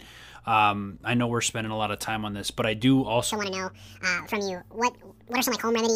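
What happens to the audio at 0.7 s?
Nothing goes wrong at 0.7 s: the speech continues cleanly through that moment, with no dropout, click, distortion or other disturbance.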